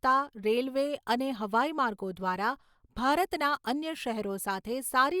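No technical faults are audible.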